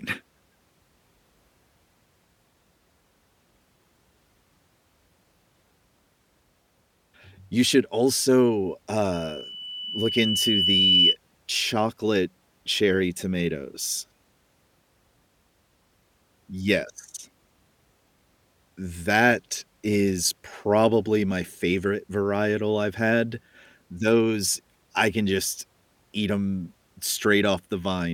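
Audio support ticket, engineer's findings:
Loudspeaker feedback squeal, 9.13–11.16 s, after "should also", gone by "chocolate cherry tomatoes". Lone 3 kHz tone swelling over about two seconds to about 5 dB above speech. Mic-to-speaker loop gain exceeding one. Self-building swell rules out steady whistle interference.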